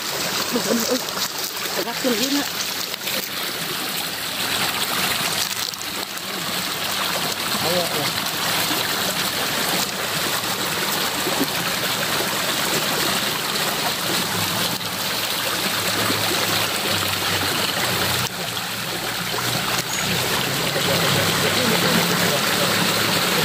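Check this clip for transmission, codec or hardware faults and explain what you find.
One fault is present. From 20.85 s to the end, a doubled audio track appears. A second, equally loud copy trails by about a third of a second. It likely comes from a slower capture path or misaligned edit. The echo lacks decay and starts abruptly.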